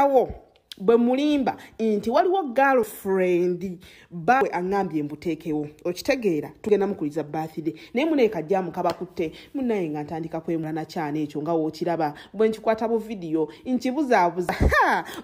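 There are abrupt skips at 2.83, 4.41, 6.69, 10.64 and 14.49 s, each with the sound jumping forward rather than going quiet. That's most likely a dropped buffer (overrun), where unread audio got overwritten and spliced shut. The gaps run from roughly 50 ms up to about 150 ms at 4.41 s.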